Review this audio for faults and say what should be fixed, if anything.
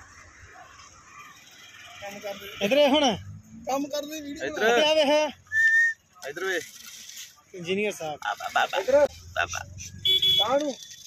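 Sample clock jitter runs throughout: the converter clock wobbles by around a microsecond, adding a faint roughness on loud, bright parts, roughly 40 dB down. A cleaner, low-jitter clock would fix it.

There's damaged data in a compressed stream from 9.03 to 9.10 s. The decoder misreads the frames there, loses sync and throws out a short blip. Check the transfer and re-encode from an intact source.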